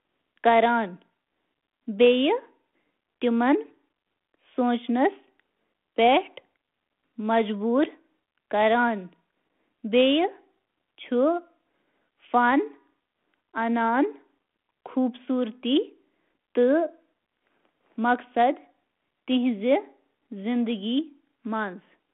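No technical faults present.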